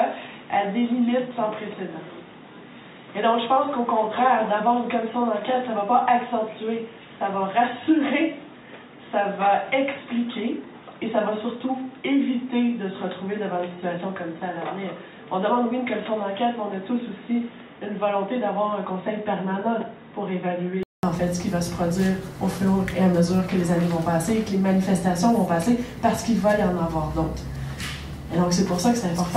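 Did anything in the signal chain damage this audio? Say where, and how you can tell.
Yes. The damage sits at the input device, before any processing. From the start to 21.03 s the band stops at 3.8 kHz, so the sound is dull and boxy. The level runs roughly 5 dB lower, and a different noise floor sits about 40 dB under the signal. A 0.2 s silence at 21.03 s marks the switch back, and the full band returns. The likely cause is an input switched to a poorer device, such as a headset's call profile.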